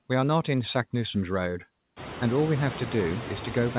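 Speech runs through a call path that leaves nothing above 4 kHz, and noise suppressor artifacts are present throughout. The suppressor pulls the bands it judges to be steady noise down by about 11 dB, frame by frame. The background therefore drops away in the gaps and swells back under each phrase. This is most obvious after the room noise rises by about 20 dB at roughly 2 s and settles about 14 dB below the speech. On a spectrogram the noise floor appears as a blotchy, pumping haze that darkens between syllables and fills in beneath them, with scattered isolated specks instead of an even wash, all capped by a hard ceiling at 4 kHz. On the waveform the quiet stretches breathe up and down with the speech rather than holding at a steady level.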